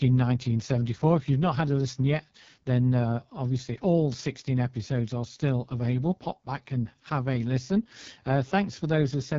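From start to finish, the speech has passed through the AMR wideband (HD Voice) codec at its lowest rate, which fits 6.6 kbit/s. Damage is heavy. The codec models the voice as pulses driving a vocal tract filter. At this rate the model is starved of detail. Voices turn rough and raspy. Above about 6.4 kHz there is only shaped noise. Nothing sounds beyond 7.3 kHz.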